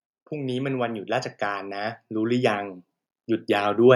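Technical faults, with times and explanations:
0.29 to 2.71 s, automatic gain rising: the gain control decided the input was too quiet and cranked it up by about 10 dB over those two-plus seconds, so the voice and the room noise behind it swell up together instead of the voice alone getting louder.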